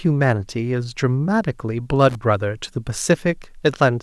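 At 2.09 to 2.15 s, a brief loose connector crackle cuts into the speech: a worn contact rapidly making and breaking chops the signal into an irregular scratch. The waveform shows jagged gaps and spikes, and the spectrogram shows scattered broadband vertical streaks.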